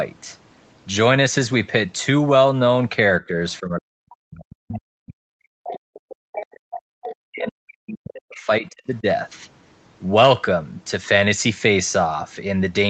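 At 3.21 to 3.36 s the speech dips by around 10 dB. This is speech suppressed in double talk, likely caused by the echo canceller failing to separate the near talker from loudspeaker echo while both sides spoke, so it attenuated everything. A much deeper episode runs from 3.60 to 6.65 s, where the level falls by roughly 40 dB and the talker nearly vanishes for about three seconds. It recurs from 7.15 to 9.06 s at a similar depth, leaving the voice faint for about two seconds.

Interleaved with this, the other side's voice leaking through appears at 3.50 to 3.59 s, very faint at about 35 dB below the speech. It comes back at 5.64 to 5.77 s (about 15 dB down), 5.95 to 5.99 s (about 25 dB down), and most clearly at 6.35 to 6.80 s, only about 10 dB under the talker. The last occurrence is at 7.03 to 7.15 s, about 15 dB down. The likely cause is residual loudspeaker echo that the canceller did not fully remove from the microphone, so a second voice comes through in short scraps. 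Several of the fragments surface while the near talker is suppressed, and the leakage at 7.03 s runs straight into the final suppressed stretch.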